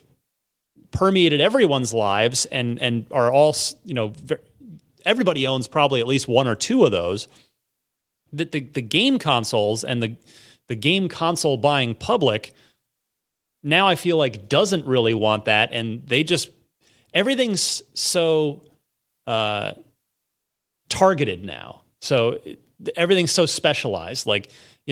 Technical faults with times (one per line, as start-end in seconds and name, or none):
none